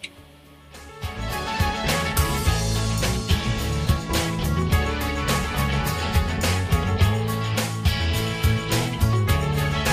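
Compressed frames skipped at 3.90 to 3.92 s: about one frame, roughly 20 ms of audio, never plays, so the sound jumps ahead. Dropped samples at 4.62 and 9.13 s: each is a single sharp click, likely from a fraction of a millisecond of samples going missing so the waveform leaps abruptly.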